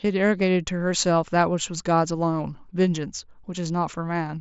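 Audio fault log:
No faults detected.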